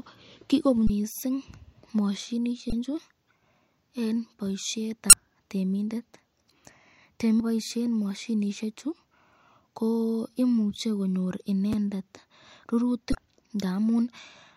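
At 0.87 to 0.90 s, 2.69 to 2.73 s, 5.10 to 5.13 s and 7.37 to 7.40 s, the speech is broken by short glitches typical of damaged data in a compressed stream. Each lasts about 30 ms. Corrupted bytes make the decoder misread those frames and lose sync, and it recovers at the next valid frame header. The result is a brief chirp, squawk, click or short hole.

At 11.73 s, chunks out of order produce a tiny jumbled moment. A segment of about 5.8 ms plays one chunk late, after the chunk that should follow it. No audio is lost, but the swapped order creates three hard joins within roughly 12 ms, heard as a garbled moment.

At 13.12 to 13.15 s, another burst of damaged compressed data gives a final glitch of about 30 ms as the decoder resynchronises.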